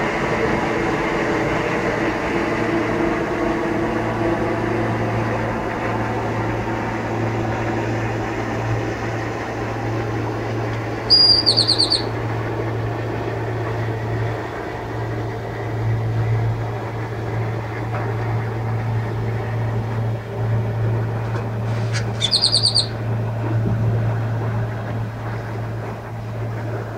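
No technical faults are audible.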